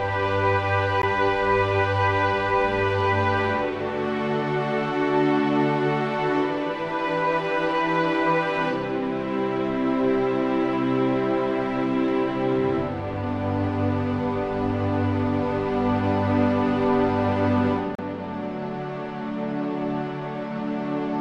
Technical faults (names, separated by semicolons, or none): gap at a join of encoded pieces